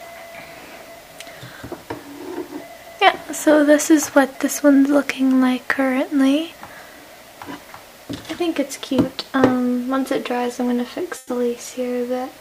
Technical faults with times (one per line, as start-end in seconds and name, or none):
11.17-11.29 burst of packet loss